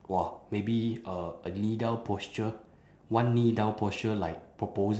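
No technical faults can be heard anywhere in the speech. It has passed through a call path whose codec stops the top end at about 8 kHz, which sounds like Opus working at a wideband setting.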